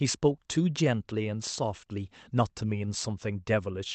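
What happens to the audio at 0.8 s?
Around 0.8 s the speech goes through small, unevenly spaced timing edits. These are repeated timing corrections, running from 0.03 to 3.79 s, where the receiver keeps cutting short pieces. The cause is clock drift between sender and receiver. The sender runs about 4 percent fast, so the jitter buffer keeps overfilling and needs trimming.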